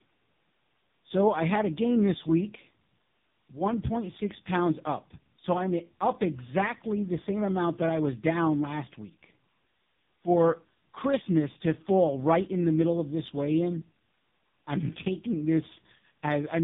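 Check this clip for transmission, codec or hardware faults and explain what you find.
The clip has one fault, present for its whole length: tandem speech coding.

Throughout the clip, the speech has passed through two low-rate speech coders in a row. The roughness and smearing fit a GSM full-rate stage followed by AMR-NB at about 6.7 kbit/s, with a G.711 link between them. Each coder re-encodes the previous one's already degraded output, so the errors stack up. The result sounds rough, muffled and warbly. A spectrogram shows nothing above 3.7 kHz, with blurred, smeared harmonics and grainy gaps between formants. The waveform envelope looks ragged.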